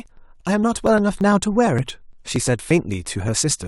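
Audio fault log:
0.06–3.63 s, periodic USB or driver dropouts. The speech carries a steady run of ticks, one every 0.115 s, about thirty in all. Each tick is a gap of around 10 ms where audio was skipped, not filled with silence, so the waveform jumps abruptly from one point to a later one. That jump makes the click. The even spacing points to a background task stalling the USB bus or audio driver at a fixed interval.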